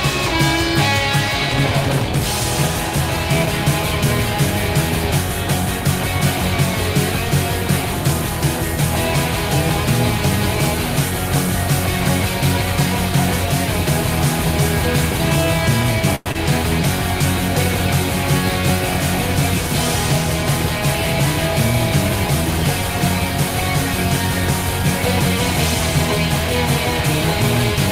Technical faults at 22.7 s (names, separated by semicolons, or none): none